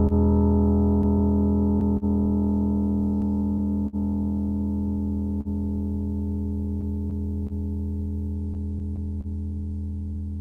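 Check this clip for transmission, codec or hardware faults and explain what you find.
Several network-timing faults affect this music, all from packets arriving late or unevenly rather than from codec or hardware damage.

Clock drift between sender and receiver runs throughout. The sender's clock is about 3% slow, so the buffer keeps draining. Uneven small hiccups appear as irregular smeared columns on a spectrogram.

Scattered short gaps occur from 0.07 to 2.05 s, about four of them, and from 6.81 to 9.27 s, about seven, with the longest around 30 to 40 ms. Each lost packet is patched by continuing the last sound, leaving brief ticks and smears. These show as short flattened waveform patches.

Repeated stalls (stutter) occur from 3.22 to 3.96 s: three stalls totalling 72 ms, the longest 57 ms. The buffer repeatedly ran empty and the last sound was extended, so the music drags and stutters. 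Stretched, faded segments appear in the waveform.

A short stall from a late packet occurs at 5.41 to 5.48 s. One packet came 42 ms late, so the sound is held, with a slight buzz or dip. A smooth horizontal smear shows on the spectrogram.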